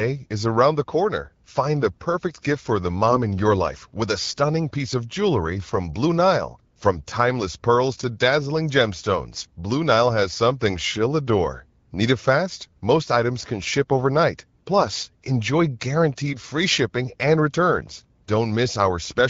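Two brief hoarse, gargly scratches break into the speech, from 3.09 to 3.17 s, between "perfect gift for the" and "in your life with", and again from 9.40 to 9.49 s. These are AMR bit errors. Around 2 and then 5 percent of the weakly protected bits arrived flipped, misplacing excitation pulses and skewing fine pitch, gain and spectral values. Pitch and level hold while texture roughens. The clear AMR-WB wideband sound around them fits a 12.65 kbit/s mode.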